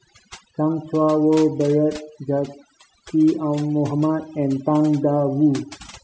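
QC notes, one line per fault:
Throughout: overdone noise removal. The noise reduction on this speech was pushed too hard. Individual frequency bands that came close to its noise estimate were cut deep or removed entirely. Quieter parts of the voice sat near that estimate and were removed along with the noise. The background drops, broken by twinkling specks where isolated bands flicker on and off.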